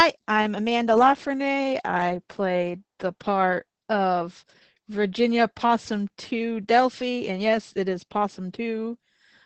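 Throughout, the speech sounds muffled, hoarse and faintly robotic: Opus voice compression in SILK mode, banded to 8 kHz with coarse excitation, fitting a rate near 10 kbps.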